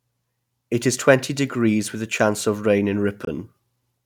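The clip is speech, with one brief gap in the sound. From 3.25 to 3.28 s the audio drops out to silence for about 30 ms, skipping about 20 ms of audio. It then resumes further along, as if it had kept playing through the hole. The likely cause is a Bluetooth dropout. Audio data failed to reach the headphones in time, so it was discarded and the output fell silent until good data arrived. The short length fits a single lost packet.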